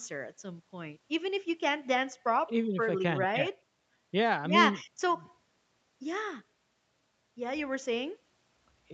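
No technical faults can be heard anywhere in the speech. It has passed through a call's microphone processing and an Opus call path, and nothing reaches above 8 kHz, so the top of the spectrum is absent, as expected on that path.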